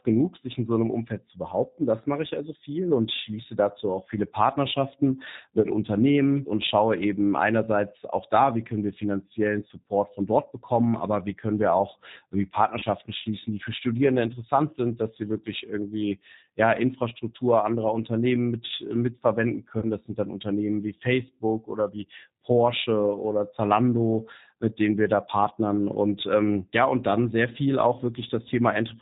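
Speech, coded throughout with the G.729 codec. It sounds band-limited below 4 kHz, rough and synthetic, which fits 8 kbit/s G.729A. VoIP packet loss concealed by the speech codec occurs three times: at 5.61 s, at 12.79 s between "können wir auch irgendwie" and "schließen die für", and at 19.79 s after "mit mitverwenden". Each time, about 30 ms of audio goes missing, which fits one lost packet. The decoder extends the last sound into a brief buzzy tone or coloured noise that fades, lasting 50 to 65 ms.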